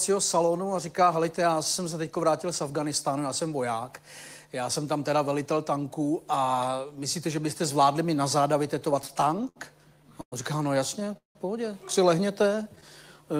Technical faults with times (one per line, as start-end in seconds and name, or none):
9.02-9.58 repeated stalls (stutter)
10.21-10.34 call audio freeze
11.00-11.37 repeated stalls (stutter)
12.43-12.84 repeated stalls (stutter)